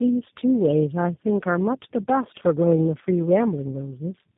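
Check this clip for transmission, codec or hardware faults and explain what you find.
One fault runs through the whole clip: tandem speech coding. The speech sounds like it passed through three low-rate speech coders in a row. The chain likely went through GSM full rate and then G.729A twice, with G.711 hops between them. Each coder re-models speech that the previous one had already degraded, so the errors stack. The result is rough, muffled and warbly. Nothing is heard above 3.8 kHz.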